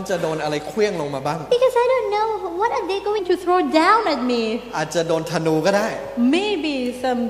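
From 1.51 to 3.19 s, a section at the wrong speed plays 1.16 times too fast. Pitch rises about three semitones, and the sound turns high and hurried. The likely cause is a playback or edit running on a mismatched clock.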